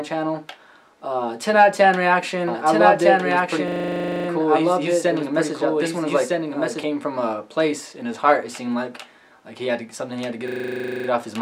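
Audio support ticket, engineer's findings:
Doubled audio track, 2.48–6.84 s: second full-band copy trailing by around one and a half seconds at near-equal level, abrupt onset and cutoff. No decay, unlike room echo. Likely a slower duplicate capture path.

System hang loop, 3.68–4.28 s and 10.48–11.08 s: 40 ms segment repeated 15 times, a steady 25 Hz buzz rather than a tonal hum. Driver froze while the ring buffer kept cycling. Little or no audio lost.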